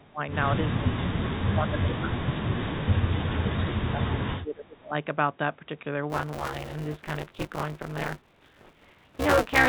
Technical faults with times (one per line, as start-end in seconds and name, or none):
0.00-0.20 speech suppressed in double talk
0.79-0.96 speech suppressed in double talk
1.50-2.20 speech suppressed in double talk
2.47-2.79 speech suppressed in double talk
3.39-4.95 speech suppressed in double talk
6.10-9.68 buffer tearing